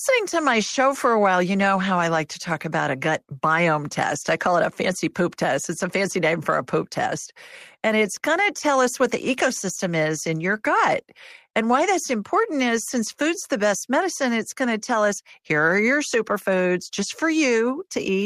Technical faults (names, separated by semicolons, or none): none